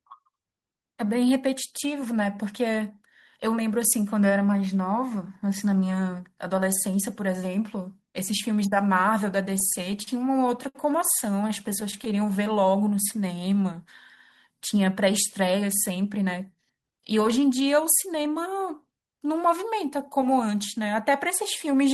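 It's a speech recording carried over a call path, with the Opus codec's coding noise and a top end that stops at about 12 kHz, consistent with a bitrate around 20 kbps. The trouble is all in the middle stretch. From 9.59 to 10.09 s there are repeated stalls (stutter): packets kept turning up late, the jitter buffer ran dry five times, and the receiver kept extending the last sound to cover the gaps. That's 74 ms of filler in total, the longest gap 42 ms, roughly 15% of that span. Nothing actually drops out, but the sound catches and drags. Then at 10.68 s there's a short stall from a late packet. One packet missed its slot, so the receiver held the preceding sound for 63 ms until it showed up and carried on from the same point. You hear one sound hang a bit too long with a faint buzz or dip, and the playout delay is 63 ms longer from there on. A second bout of stutter runs from 11.37 to 12.19 s: eight gaps, again 74 ms filled, but none longer than 11 ms and only about 9% of the span. 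Overlapping its last moments, from 12.12 to 13.54 s, the jitter buffer slow-down kicks in. To rebuild its reserve the receiver kept repeating single pitch periods and scraps of pauses, adding 153 ms, so playback runs at about 90% speed with the pitch unchanged and the sounds stretched out. Finally, from 15.39 to 17.13 s, there's a jitter buffer speed-up. With more audio queued than it wanted, the receiver trimmed out short pitch-period pieces over and over, around a fifth of a second in all. Playback runs at about 110% speed, still at the same pitch, and the delivery sounds noticeably hurried.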